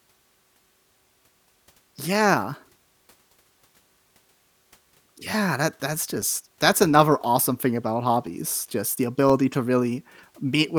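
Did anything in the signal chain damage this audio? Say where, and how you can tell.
Yes. Periodic USB or driver dropouts run through the speech from 0.08 s to 10.32 s, a tick roughly every 1.02 s, about ten in all. The damage happens at the driver or buffer stage: something stalls the USB transfer or the audio driver at a steady interval, so around a millisecond of samples never arrives and is replaced with silence. The tiny gap makes a click, and the clockwork spacing shows it comes from the system rather than the recording.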